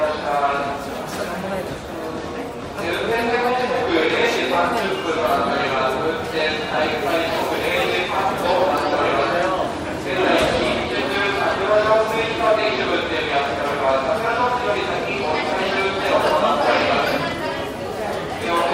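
No technical faults can be heard anywhere in this recording.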